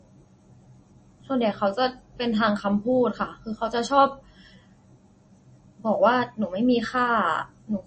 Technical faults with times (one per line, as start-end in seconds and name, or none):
0.00-7.87 MP3 compression